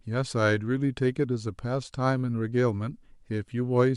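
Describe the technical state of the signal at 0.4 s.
The speech signal at 0.4 s is intact, with no audible fault at that moment.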